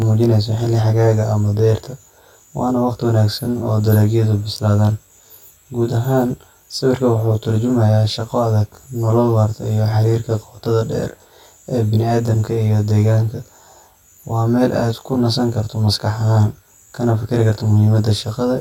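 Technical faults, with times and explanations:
Throughout, channel delay (comb filtering): One channel of this speech runs late by roughly 20 ms against the other. When the two are summed to mono, the shared sound cancels at evenly spaced frequencies. The first notch sits low, near 30 Hz, and further notches repeat up the spectrum at fixed spacing. Each cancellation carves a gap in the tone. Together they give the rough, slightly doubled sound heard across the whole clip.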